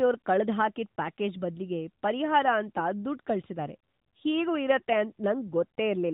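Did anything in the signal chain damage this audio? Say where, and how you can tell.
No, nothing in the signal chain stood out as damaging this speech on listening.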